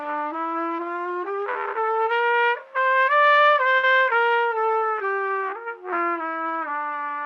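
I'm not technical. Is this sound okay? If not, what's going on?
No. At about 3.77 to 3.85 s there is a burst of packet loss. A short run of audio never arrived, so the receiver stretched the last sound for about 60 ms while fading it, then resumed with about 60 ms of audio skipped.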